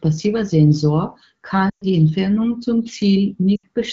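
Lost AMR speech frames at 1.70–1.84 s and 3.56–3.67 s: the decoder stretches the last sound with fading gain, seen as smeared harmonics decaying toward silence.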